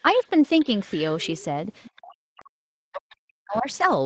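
Faint traces of another voice sit under the speech from 0.00 to 0.15 s and from 0.60 to 0.65 s. They come back slightly stronger from 1.21 to 1.44 s and from 1.83 to 1.97 s, and again from 3.52 to 3.76 s. This is the other side's voice leaking through. The likely cause is the talker's loudspeaker feeding the microphone, with the echo canceller leaving a residue. That residue sits roughly 25 to 30 dB below the speech.

From 1.97 to 3.67 s, the speech itself keeps sinking and dropping out in pieces. The cuts add up to roughly one and a half seconds, and the deepest dips are about 40 dB. This is speech suppressed in double talk. With both sides active at once, the canceller likely could not tell its own talker from the echo, so it turned everything down. The audio is band-limited at 8 kHz throughout, which fits the Opus call path.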